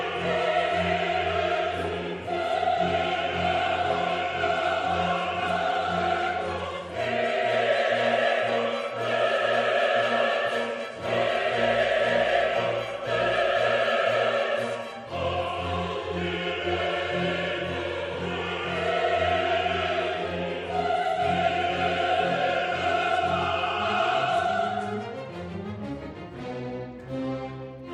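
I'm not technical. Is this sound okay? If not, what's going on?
Yes, this sound is okay, and nothing is going on with it that needs explaining.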